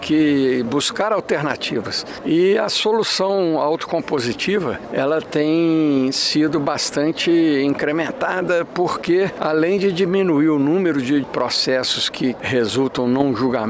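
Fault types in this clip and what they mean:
No faults detected in this clip.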